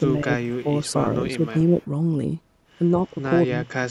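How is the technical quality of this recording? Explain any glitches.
The recording has two kinds of fault: the speech is ducked in three places, and there is one brief, faint echo.

Speech suppressed in double talk occurs from 0.0 to 0.67 s, 1.37 to 1.55 s, and 3.11 s to the end. The level dips by roughly 15 dB, then about 5 dB, then about 30 dB. The likely cause is an echo canceller treating the talker as loudspeaker echo while the other side spoke.

Echo leak occurs at 1.82 to 1.86 s. A faint copy of the speech returns 185 ms late, about 35 dB below the original, likely because the far end's echo canceller let some loudspeaker pickup through. Unlike room reverb, it is a distinct delayed repeat, not a smooth tail.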